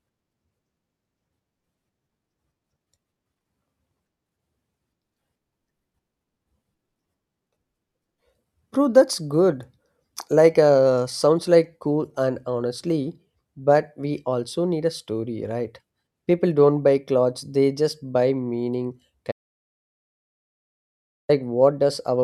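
At 19.32 s, just after "they just buy meaning", the speech cuts to silence until 21.29 s, with no room tone left. That audio dropout to silence likely came from lost input.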